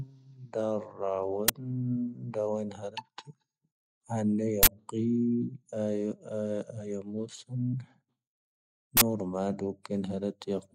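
A loud crack at 1.48 s and bursts of digital noise at 4.63 to 4.67 s and 8.97 to 9.01 s break into the speech. Each is an uninitialised buffer, where leftover memory played as samples before audio was written. Lengths of 11 ms and 43 ms fit 512- and 2048-sample buffers.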